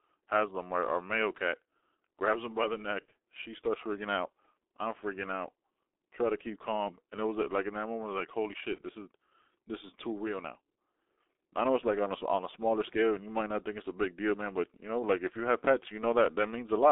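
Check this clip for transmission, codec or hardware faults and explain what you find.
The speech carries two kinds of fault: heavy G.723.1 codec damage throughout, and two brief packet-loss dropouts concealed by that codec.

G.723.1 codec: for the whole clip, speech is squeezed into roughly a 300 Hz to 3.6 kHz telephone band at 6.3 kbit/s. Its 30 ms frames and slow-moving voice model leave it muffled and hoarse, with smeared consonants. Unlike a simple low-pass filter, the roughness itself comes from the coarse coding.

VoIP packet loss concealed by the speech codec: at 3.06 s, after "grabs him by the", and at 8.75 s, between "like holy" and "this is this is", one 30 ms frame goes missing. The decoder repeats its last pitch and filter at falling gain, giving a short stretched, fading sound rather than silence or a click, and the speech stays weakened briefly after it.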